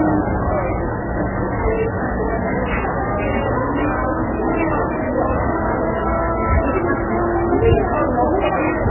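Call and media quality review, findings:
MP3 compression, throughout: nothing above 2.9 kHz, watery swirl and smeared attacks. Likely MP3 at a very low bitrate, fitting roughly 8 kbps; weak lines dropping out frame to frame.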